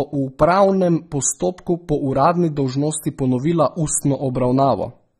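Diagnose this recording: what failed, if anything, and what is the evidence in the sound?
The codec stage is where this went wrong. Through the whole speech clip there's nothing above about 14.9 kHz, and sibilants sound smeared and fizzy, which points to AAC compression, likely AAC-LC at a low bitrate around 24 kbps, starving high bands and quantising coarsely.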